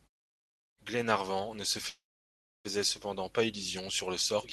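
A speech clip with a call audio freeze from 1.89 to 2.67 s: the sound hangs briefly, then falls quiet for about 0.65 s before resuming where it stopped, likely because delayed packets drained the jitter buffer, so nothing is lost but everything afterwards arrives about 0.75 s late.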